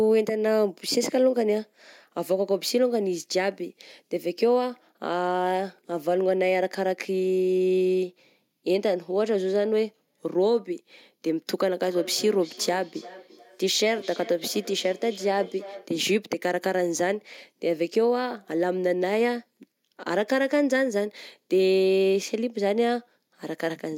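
From 11.82 to 15.98 s there is feedback echo between two devices. A second device in the room replays the call, and this microphone recaptures it. Its echo canceller cannot remove that sound. The speech returns roughly every 0.3 s, peaking about 17 dB below the speech.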